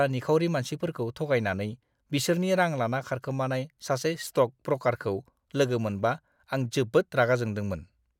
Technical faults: none

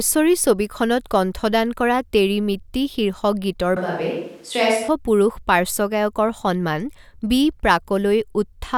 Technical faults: switch to a distant microphone

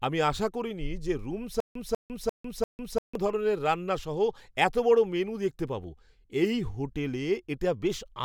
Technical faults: stutter with silent gaps

